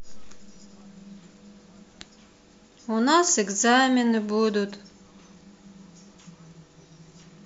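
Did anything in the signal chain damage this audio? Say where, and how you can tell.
No, nothing in the chain audibly damaged this speech.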